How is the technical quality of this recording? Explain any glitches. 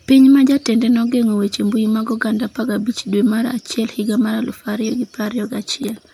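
No technical glitches can be heard anywhere in the recording. There is nothing in the audio that needs explaining.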